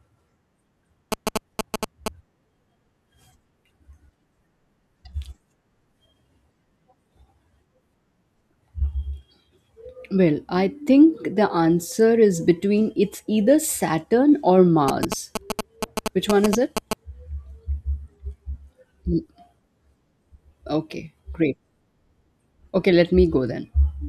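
GSM signalling bursts appear from 1.12 to 2.08 s and again from 14.88 to 16.93 s. A nearby 2G phone is exchanging short control transmissions with its network. The audio circuitry rectifies those radio pulses into the signal, producing a galloping dit-dit-dit of brief buzzes pitched at the 217 Hz burst rate. Both episodes sit at roughly the same loudness as the speech.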